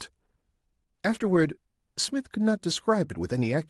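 No faults are audible in the speech, which carries only the band-limited character of the WebRTC call path, with the top end stopping near 12 kHz as an Opus-coded link at that bandwidth would give.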